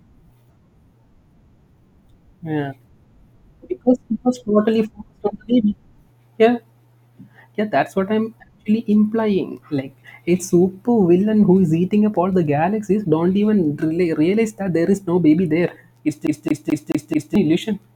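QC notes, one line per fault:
16.27–17.35 s, CD stuck on one turn: a scratch or defect on the disc sends the laser back one track at the same point on each rotation, so the player keeps rereading the same short stretch instead of moving on. The speech locks into a fast, even stutter, a slice of about 0.22 s (217 ms) repeated five times with a brief mute at each jump, before playback moves past the spot near the end of the clip.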